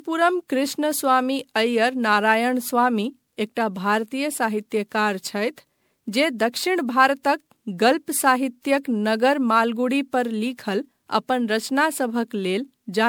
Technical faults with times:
0.00-13.09 generation loss

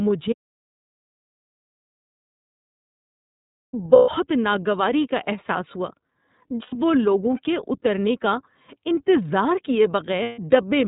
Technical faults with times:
0.00-10.87 iLBC codec
0.33-3.73 audio dropout to silence
3.96-4.09 lost iLBC frames
6.62-6.75 lost iLBC frames
10.23-10.39 lost iLBC frames

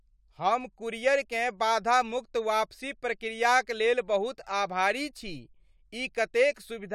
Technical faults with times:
none

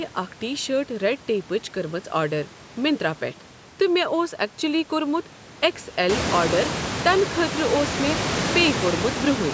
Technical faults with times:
none

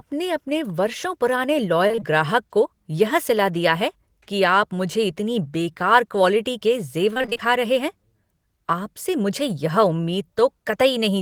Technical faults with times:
1.87-2.03 repeated packet loss (robotic sound)
7.13-7.48 repeated packet loss (robotic sound)

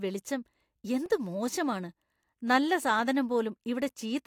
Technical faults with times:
1.06 block of digital silence

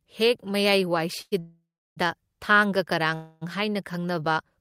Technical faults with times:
1.21-1.98 call audio freeze
3.14-3.43 call audio freeze

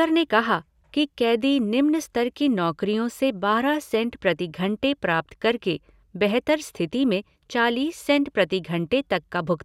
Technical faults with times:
none

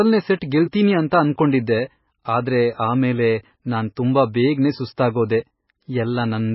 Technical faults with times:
0.00-6.55 MP3 compression

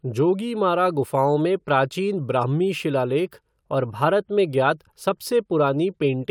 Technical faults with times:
none

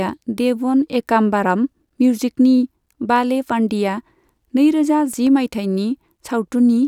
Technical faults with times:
5.00-5.27 CD scratch ticks

